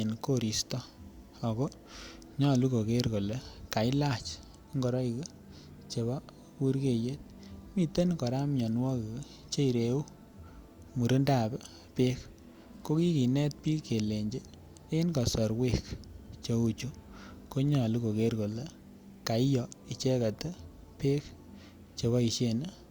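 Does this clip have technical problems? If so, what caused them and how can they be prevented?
No, there are no technical problems to report here.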